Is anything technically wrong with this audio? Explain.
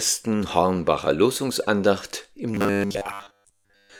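Yes. From 2.55 s to the end at 3.99 s there is robotic sound from repeated short buffers. The likely cause is that new audio reached the output too seldom, so the software kept replaying the last short buffer to fill the gaps, for most of this stretch, while the real audio was skipped. The repeats impose a fixed pitch at 100 Hz, which fits a 10 ms buffer, and the sound turns into a rigid, metallic buzz that only loosely follows the original.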